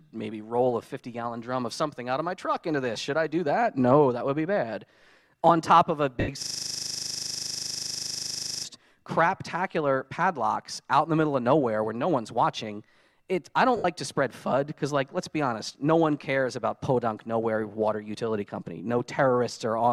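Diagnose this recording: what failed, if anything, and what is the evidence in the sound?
Lost LE Audio frames at 6.20–6.29 s and 13.77–13.85 s: a codec and wireless-link fault. Gaps of about 80 ms became noisy smears as the LC3 decoder concealed them with recycled, sign-scrambled spectra.

System hang loop from 6.43 to 8.65 s: a driver or buffer fault. One 40 ms piece repeats dozens of times, a 25 Hz buzz-stutter, as hardware kept replaying its ring buffer.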